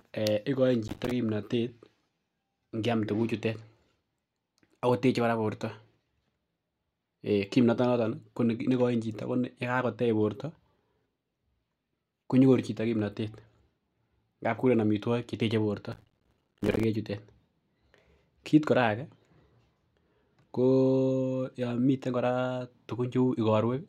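Processor overload crackle strikes at 0.88 to 1.11 s and again, longer, at 15.92 to 16.84 s. The processor repeatedly misses deadlines for buffers of roughly 5 ms, each leaving a hard-edged silent gap, so the speech turns into a gritty tearing crackle that stops once the load eases.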